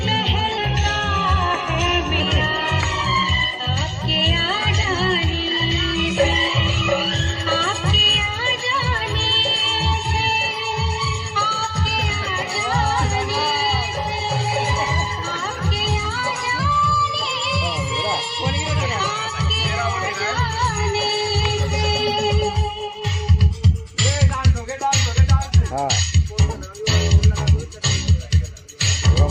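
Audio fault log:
0.58–2.20 s, drift correction step: sound drops about a semitone (−111 cents) and slows 6.21%, likely a clock-matching rate jump. Spectrogram harmonics step down.
16.59–18.80 s, drift correction step: sound rises about a semitone (+104 cents) and runs 6.21% fast, likely a rate step draining a buffer. Harmonics jump upward, waveform periods visibly shorten.
23.51–24.34 s, drift correction step: a shorter +104-cent, 6.21%-fast burst, likely the same rate correction repeating. Spectrogram lines shift up briefly.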